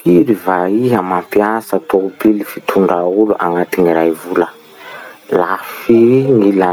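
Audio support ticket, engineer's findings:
Gain pumping throughout the speech, whole clip. Level swing around 20 dB. Likely cause: input gain far too high, with a fast limiter or compressor clamping every peak. Dynamics squashed.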